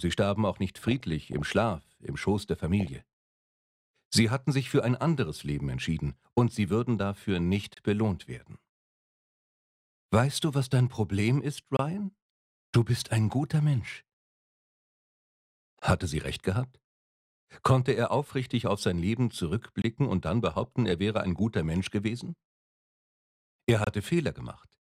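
DAB burbling breaks in at 0.86–1.51 s, 2.80–2.96 s and 20.48–20.92 s. Weak reception lets bit errors through the error correction into the MP2 data, so corrupted samples put short noise blips into individual sub-bands and corrupted scale factors make sub-bands jump in level, giving burbling consistent with an error rate of a few tenths of a percent. A gap between chunks cuts about 25 ms of silence into the audio at 7.74–7.77, 11.77–11.79, 15.79–15.82, 19.82–19.84 and 23.84–23.87 s. These holes recur every 4 s at the joins between chunks, where likely padding or a late-starting player interrupts playback without losing any sound.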